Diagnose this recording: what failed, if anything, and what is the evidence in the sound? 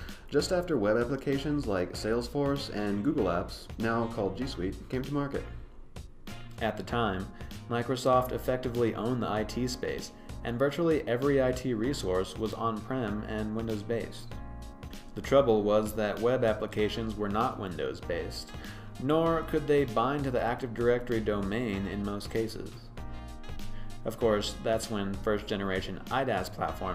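Nothing in the recording stood out on listening as a sign that any stage of the chain had failed.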